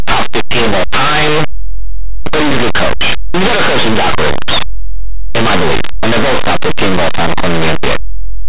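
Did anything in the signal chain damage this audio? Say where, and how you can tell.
Yes. From start to finish the speech comes out as very loud, harsh distortion, a constant loud roar rather than a clean signal. This is a sample-format conversion fault: linear audio read as companded. The data was written as linear 8-bit but decoded as mu-law. Mu-law expansion sends small codes just to one side of zero to the loudest outputs while keeping those on the other side small, so quiet passages blast out as harsh distortion.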